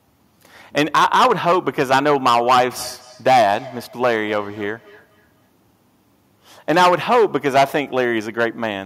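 From the first syllable to the end, the speech carries hard clipping. The signal is driven about 14 dB past what one stage can pass, so its peaks are sliced flat, and a small share of samples, around one in twenty, sits on that ceiling. The flat tops add harmonics high in the spectrum, heard as a harsh, gritty fuzz on every loud vowel. Unlike a limiter or compressor, which dull peaks smoothly, this adds raw distortion that tracks level exactly.

From 2.78 s to 5.49 s a feedback echo between two devices appears. A second device in the same room is playing back what the first microphone sent, and that microphone picks it up again. The canceller on the first device only removes its own playback, so the echo survives. Each syllable returns at a fixed interval of roughly a fifth of a second, each repeat thinner and more ringing, peaking about 22 dB below the speech. A single device's acoustic echo would return once. 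Room reverberation would smear instead of stepping.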